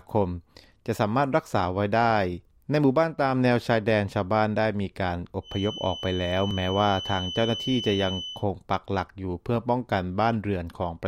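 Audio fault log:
5.41 to 8.46 s, feedback whistle: a thin, steady tone at 3 kHz sits behind the sound for about three seconds, roughly 10 dB under the main signal and swelling and fading slowly in level. That's likely a loudspeaker-to-microphone loop parked right at the edge of feedback, so one high frequency keeps ringing without ever running away into a full howl.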